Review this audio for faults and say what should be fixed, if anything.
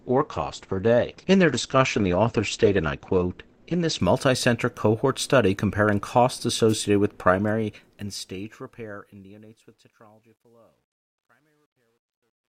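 The first 4.0 s come from an adaptive stream starting at a low bitrate. Nothing reaches above 8.6 kHz, so the speech sounds dull and a bit swirly, with the codec artefacts easy to hear. The character fits something like a 16 kbit/s Opus rendition. Right at 4.0 s the quality jumps to a much fuller sound, more like 64 kbit/s, with no gap. The player was playing it safe until it had measured the connection. To prevent it, start the player on a higher rung or pre-buffer before playback so listeners never hear the startup rendition.

From 6.69 to 6.73 s there's a wireless microphone noise hit, a quick swish of static lasting about 50 ms. That's an analogue FM radio link briefly fading as reflections cancel the signal, which lets receiver noise surge up over the speech for that moment. To prevent it, use diversity receivers, shorten the distance to the antennas and keep a clear line of sight so the signal doesn't dip into a null.

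From 7.30 s to the end at 12.53 s there's truncation distortion on the fade. As the level sinks, it gets grainy, and from 9.36 s onward the tail is at its worst and gritty. That points to the fade being computed at something like 12-bit resolution with no dither, so the quiet waveform collapses into a few coarse steps. To prevent it, do fades at high resolution and add dither when reducing to the final word length.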